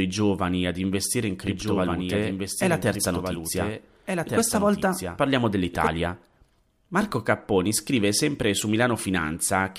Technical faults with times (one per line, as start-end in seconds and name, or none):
1.47-5.87 doubled audio track